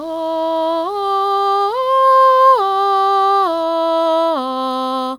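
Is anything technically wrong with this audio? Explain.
Yes. From 0.00 to 3.63 s there's mains buzz: switching spikes from the 60 Hz mains leak in, stacking harmonics into a raspy drone sitting faintly under the music.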